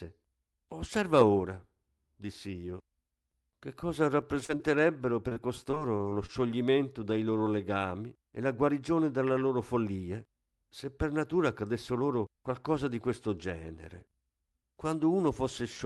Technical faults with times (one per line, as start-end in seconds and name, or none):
4.21-4.61 repeated packet loss (robotic sound)
5.29-6.30 repeated packet loss (robotic sound)